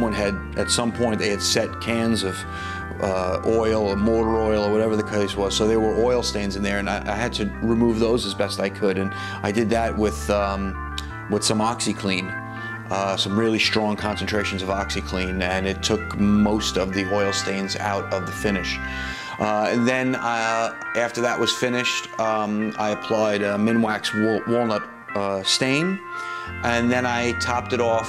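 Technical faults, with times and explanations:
No technical faults can be heard anywhere in the clip. Nothing in the audio calls for a time or an explanation.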